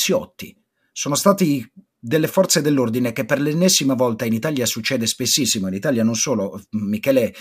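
Nothing in the speech recording points to a technical fault at any moment, with the signal holding steady and intact throughout.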